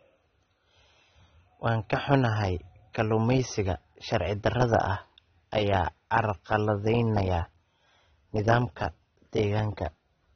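Likely AAC compression at a low bitrate, around 24 kbps, strips the speech of everything above 6.3 kHz throughout, leaving it dull, smeared and audibly warbling.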